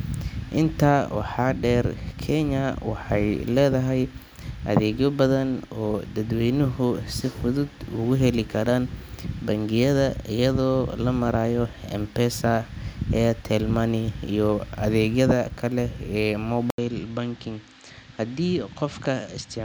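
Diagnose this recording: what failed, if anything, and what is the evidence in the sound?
At 16.7 s the speech drops out for 80 ms, then returns duller, a little quieter, with nothing above 8.4 kHz and a faint new hiss. Most likely the input switched to a poorer device at the driver stage, and it stays there to the end.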